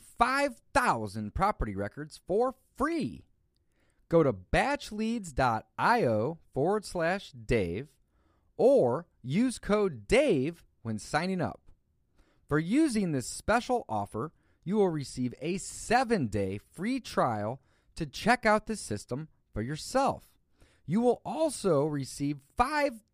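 No technical faults can be heard anywhere in the speech recording; the signal stays steady and intact throughout.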